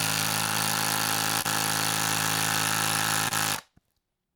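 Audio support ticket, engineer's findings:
Short concealed packet loss at 1.41–1.46 s and 3.28–3.33 s. Jitter buffer or network path: about 20 ms of audio arrived too late for the decoder each time, which fits a single lost packet. The receiver's concealment extended the preceding sound for about 29 ms and 25 ms, then cross-faded back. The result is a brief smear or wobble in the audio.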